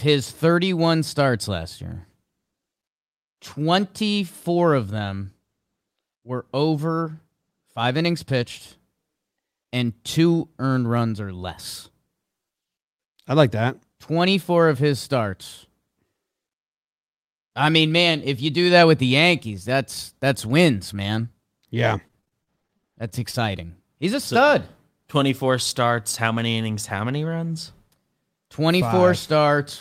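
Repeated packet loss (robotic sound) runs from 22.07 to 23.71 s. Over this 1.6 s stretch the speech stream keeps losing data in a rapid string of short holes, the longest about 35 ms. The receiver patches some of them by stretching the last received sound forward, about 288 ms in all, while about 160 ms simply drops out. The speech turns choppy, with clipped fragments.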